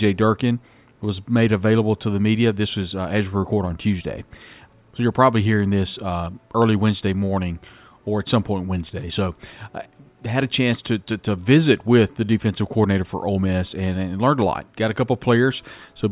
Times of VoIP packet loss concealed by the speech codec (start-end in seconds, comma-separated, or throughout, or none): none